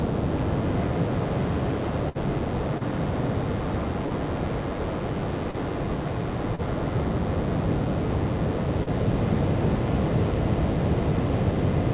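A DECT cordless phone buzz runs through the whole clip: a thin, steady 100 Hz tone with a dense stack of harmonics, sitting roughly 20 dB below the sound. It comes from a nearby DECT handset or base transmitting a radio burst every 10 ms, which the audio circuitry rectifies into an audible buzz.

A burst of packet loss hits from 2.09 to 2.18 s. About 60 ms of audio arrived too late or not at all. The receiver stretched the last sound over roughly 56 ms, letting it fade, then resumed further on with that stretch of the original gone.

Short concealed packet loss follows at 2.78, 4.06, 5.51, 6.55 and 8.83 s. Each time about 30 ms failed to reach the decoder, and the receiver patched the hole with 24 to 35 ms of continued or noise-shaped sound before blending back. Each is heard as a brief smear or wobble. Throughout, the call path passes nothing above 4 kHz, which fits G.711 A-law at 64 kbps.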